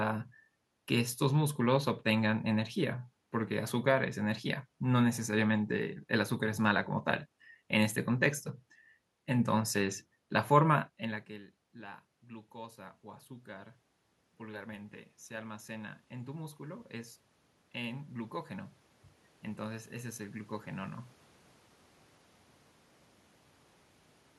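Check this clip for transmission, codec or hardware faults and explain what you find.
One system fault is present: automatic gain rising from 11.03 to 21.04 s. After the level dropped by about 21 dB around 11 s, when the talker moved away, the gain control slowly added about 13 dB. Voice and room noise swell together, unlike a talker simply returning closer.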